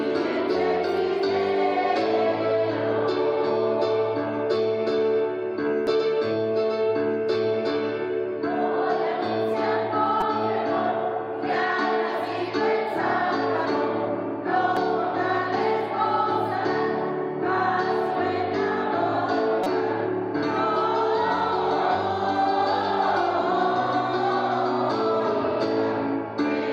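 The audio has four short bursts of damaged data in a compressed stream: at 5.87 s, from 10.21 to 10.23 s, at 14.77 s, and from 19.64 to 19.67 s. Each one is a quick chirp or blip. Bytes in the encoded file got lost or overwritten there, so the decoder misread those frames, lost sync and had to hunt for the next valid frame header before playback could carry on.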